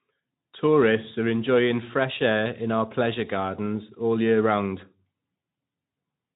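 No technical faults are audible.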